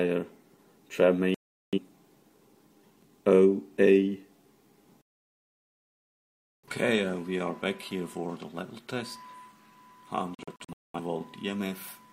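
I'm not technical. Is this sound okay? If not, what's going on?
No. A digital broadcast dropout occurred three times: the receiver lost the signal and muted, so the sound cuts out at 1.34 s (0.38 s), from 5.02 to 6.68 s, and in short holes around 10.35 to 10.99 s.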